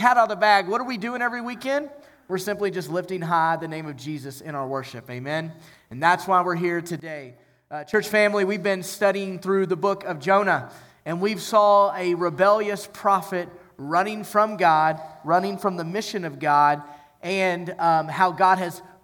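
A digital gain setting most likely changed between one sample and the next with no ramp, producing a sudden gain jump at 7.00 s: the whole signal, background noise included, drops by about 12 dB at once and stays there until 7.94 s.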